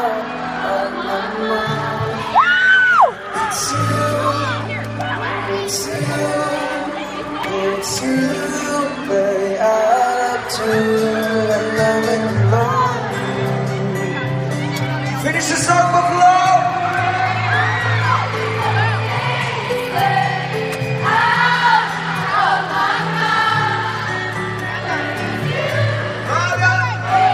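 Nothing goes wrong anywhere in the clip, and the audio runs through without a single fault to point to.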